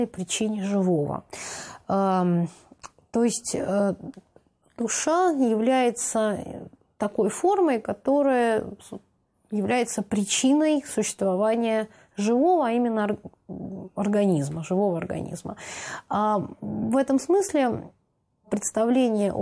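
No faults are audible anywhere in the clip.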